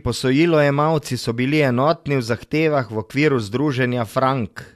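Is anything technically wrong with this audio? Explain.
No, nothing technically wrong.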